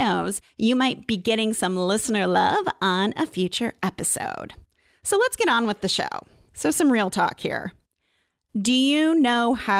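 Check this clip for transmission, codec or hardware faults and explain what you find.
No transmission, codec or hardware faults.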